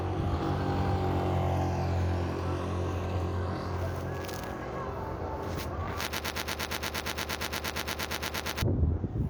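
From 6.13 to 8.62 s, a broken-record loop repeats a 116 ms fragment 21 times back to back, likely a stalled player or stream; the intervening audio is lost.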